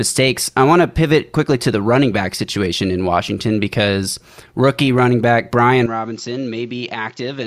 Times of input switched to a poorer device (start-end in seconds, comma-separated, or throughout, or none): 5.86-7.47